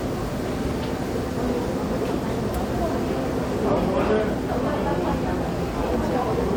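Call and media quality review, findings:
No faults found in review.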